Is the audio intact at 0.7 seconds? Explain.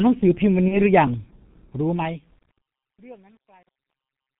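No. From 0.68 to 0.80 s there's VoIP packet loss concealed by the speech codec. The decoder stretched its last pitch and filter across the gap, which fits a single lost 30 ms frame, so the sound turns into a buzzy tone or coloured noise that fades and stays weak until about 0.80 s. The whole clip also runs through the G.723.1 codec at 6.3 kbit/s, so it's muffled, hoarse and smeared there too, with nothing above 4 kHz.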